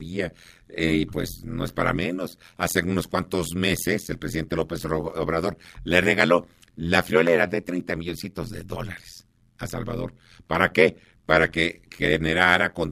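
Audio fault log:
throughout overlap-add ripple: level dips about 60 dB once per frame, roughly 100 times a second, a harsh metallic buzz locked to the frame rate, unlike a smooth tremolo.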